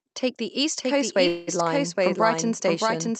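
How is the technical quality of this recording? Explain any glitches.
The speech has two clear faults: a second copy of the whole track runs throughout, and there is a brief stall partway through. Both sit on top of a call-codec path whose sound, with nothing heard above about 8 kHz, fits Opus at around 48 kbps.

Doubled audio track, throughout: A full-band duplicate trails the original by roughly 0.7 s at about the same level. It is likely caused by a second, slower capture path or a misaligned edit. Unlike reverb or an echo canceller's leftover echo, the copy has no decay and no room colour.

Call audio freeze, 1.27 to 1.49 s: The sound hangs as a fading buzz or hiss for about 0.2 s, then resumes where it left off, so nothing is lost. The likely cause is delayed packets draining the jitter buffer. That separates it from a dropout, which would cut out sound and leave silence.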